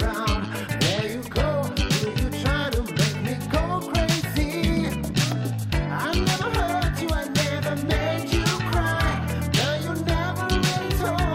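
There are no technical faults to describe at any point in the clip.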